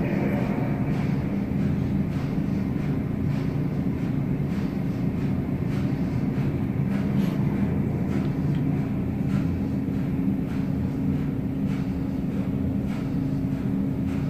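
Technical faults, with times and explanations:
No technical faults can be heard anywhere in this audio.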